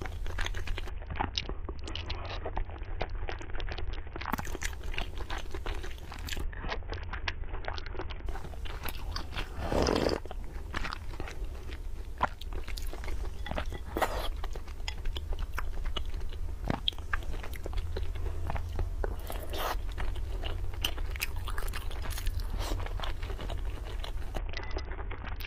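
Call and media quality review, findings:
Bluetooth SBC bit pool drop, 0.89–4.31 s, 6.44–8.26 s, 24.38 s to end. Treble dulls, gritty quantisation noise rises, recovery between. Component: A2DP SBC encoder on a congested link; depth of loss points to bit pool falling from about 31 to about 6, near 55 kbps. Top sub-bands starved, rest coarsely quantised. Unlike a codec fallback or low-pass filter, grit accompanies the dulling and full bandwidth returns within seconds.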